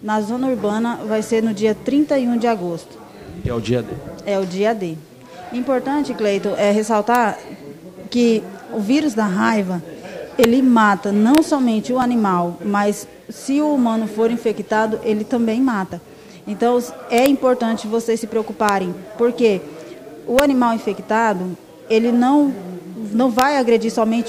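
At 6.04 s and again at 12.02 s, two stream segments overlap in their time stamps, and the player trims sound that was never actually doubled. Each time, a sliver of under 20 ms disappears and the waveform jumps, producing a small click or skip. The six-second spacing fits a six-second segment length. From 7.15 s onward, integer overflow appears: loud peaks that only just exceed the limit, by about 0 to 1 dB, wrap around to the opposite sign instead of being held at the limit. These peaks occur at 7.15 s, at 10.44 s, at 11.35–11.38 s, at 17.18–17.26 s, at 18.69 s, at 20.39 s and at 23.39–23.42 s. Each one is heard as a harsh crack, far sharper than ordinary clipping.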